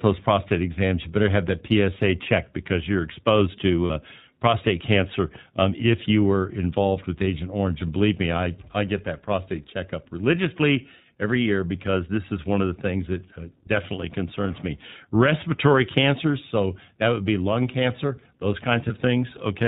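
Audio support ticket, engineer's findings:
iLBC codec, whole clip. Speech band-limited, nothing above 4 kHz. Rough, slightly synthetic texture, plainly audible. Each frame's excitation coded on its own. Character fits the 15.2 kbps mode with 20 ms frames. Probable component: narrowband VoIP encoder on the call path.

Lost iLBC frames at 3.86–3.91 s and 18.88–18.92 s. Brief held, buzzy-breathy vowel fills each gap. Decoder repeating the last pitch cycle mixed with noise. First gap fits two 20 ms frames, second one frame. Speech recovers almost at once. Probable component: network packet loss.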